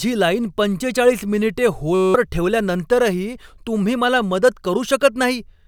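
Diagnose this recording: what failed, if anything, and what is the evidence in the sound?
The failure is at the driver or buffer stage: a system hang loop. From 1.95 to 2.14 s the speech stops and a steady buzz takes its place. The buzz repeats a single 5.33 ms fragment about 37 times, at 188 Hz. The computer or driver stalled. The audio hardware kept replaying the same ring buffer, which fits a 256-sample buffer. About a fifth of a second of speech is lost under the buzz.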